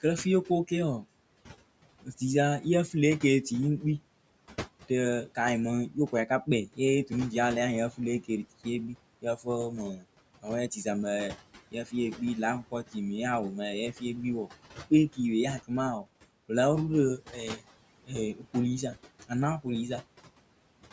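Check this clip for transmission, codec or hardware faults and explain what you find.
The trouble here comes from the noise suppressor on the call's microphone path, with two linked effects. The room noise, about 17 dB under the talker, is ordinary, and the call processing caps everything at 8 kHz.

Noise suppressor artifacts run throughout. The suppressor pulls what it judges to be steady background down by about 18 dB, frame by frame, so the noise dips away in the pauses and comes back up under the talking, leaving a pumping residue.

Speech cut by the noise suppressor shows up at 0.02–1.05, 2.03–3.83, 4.89–7.11, 7.91–10.86, 11.71–12.96, 13.93–16.5 and 17.18–19.66 s. Quiet consonants and word tails get mistaken for noise and ducked by about 11 dB early on, deepening to about 17 dB later, so they sound swallowed. The affected stretches grow from a tenth of a second to around half a second.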